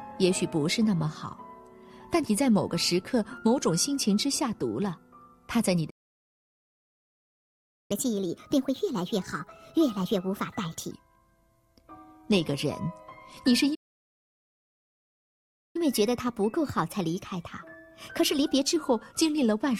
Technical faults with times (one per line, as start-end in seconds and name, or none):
5.89-7.91 playback stall
7.91-10.91 catch-up at higher speed
13.74-15.76 playback stall
15.76-18.76 catch-up at higher speed